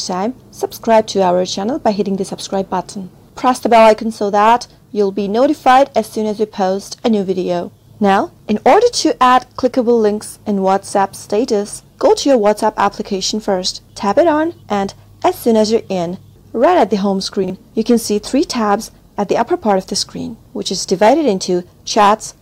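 At 17.44 to 17.50 s, a 20 ms chunk of audio arrived two chunks late and plays after the two that should follow it: chunks out of order. Nothing is lost, but the three hard joins make a brief jumbled stutter.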